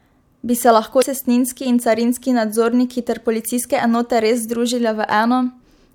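A speech clip with damaged data in a compressed stream: corrupted bytes from 0.98 to 1.03 s make the decoder misread frames and lose sync, producing a brief glitch.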